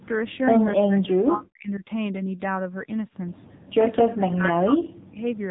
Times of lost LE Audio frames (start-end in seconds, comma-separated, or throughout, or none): none